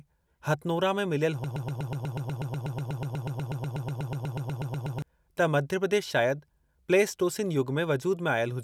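The stream likely stalled and kept resending the last fragment it held, producing a broken-record loop from 1.44 s to 5.02 s. A 0.12 s slice of speech repeats 29 times back to back as a fast, mechanical stutter, and the speech due in those seconds is lost.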